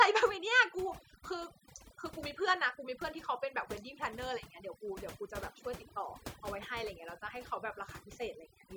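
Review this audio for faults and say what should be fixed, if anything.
The big one here is overdone noise removal, and it runs the whole way through the speech. The denoiser was pushed too hard, so any frequency band that drifts near its idea of the noise gets slammed down or shut off entirely, and the quieter parts of the voice get eaten along with the noise. That's why the gaps sound almost dead apart from little twinkling specks. Next time, back the reduction amount off and take the noise profile from a clean stretch of room tone.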